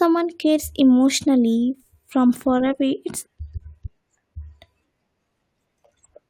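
At 3.25 s, right after "away it's", the speech jumps abruptly forward with a brief click-like blip, so the phrase lurches without a natural pause. The likely cause is a stream segment skipped: one chunk of a segmented stream failed to load and the player carried on with the next one. On a waveform this appears as a hard splice where the envelope changes instantly. A spectrogram shows a thin vertical broadband line with mismatched harmonic patterns on either side.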